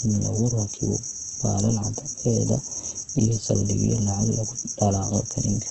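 Across the whole speech clip the signal is bandlimited, with nothing above 8.5 kHz, and the remaining spectrum sounds rough and grainy, with noisy fill where detail should be. This is likely Opus compression, running in its CELT music mode at a wideband setting. The heavy damage points to a very low bitrate, around 12 kbps. At that rate the encoder keeps each band's energy but substitutes folded or noise content, producing coarse texture rather than swirling holes.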